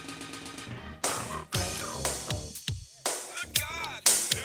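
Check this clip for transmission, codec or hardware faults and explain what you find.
One fault is present: pre-emphasis left on, from 3.37 s to the end. The treble boost of a J.17 curve was applied without the matching de-emphasis, leaving 10 kHz about 11 dB hot relative to 1 kHz, so the sound turns thin, bright and sibilant.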